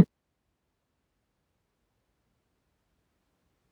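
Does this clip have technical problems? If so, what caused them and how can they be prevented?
Yes. Dropped buffers (overrun) at 0.79 s, 1.58 s and 3.2 s: at each point the speech jumps forward with no gap, losing roughly 0.15 s at 0.79 s, a twentieth at 1.58 s and a tenth at 3.2 s. The likely cause is the recording program falling behind, so the hardware overwrote audio it hadn't read yet and the remaining pieces were spliced together. Larger capture buffers and a less loaded, higher-priority recording thread would prevent it.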